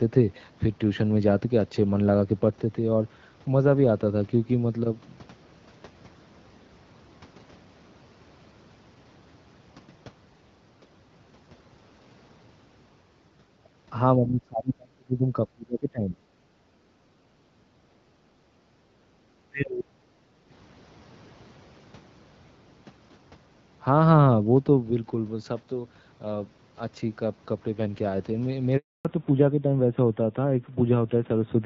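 From 14.18 to 16.2 s and again from 19.52 to 20.34 s, the speech sinks by roughly 30 to 35 dB and breaks up, likely speech suppressed in double talk as the echo canceller mistook the talker for far-end echo. Between 16.48 and 19.24 s, the background is gated by the echo canceller, with room sound pulled down by about 10 dB while the loudspeaker path is active, then restored. At 28.77 s a 280 ms handover gap leaves silence until 29.05 s, losing whatever fell inside it. From 29.05 s to the end, a fallback to narrowband removes everything above 4 kHz, so the voice turns duller and rougher than the lightly coded HD Voice before it. That fits a drop from AMR-WB at 12.65 kbit/s to AMR-NB at around 7.4 kbit/s.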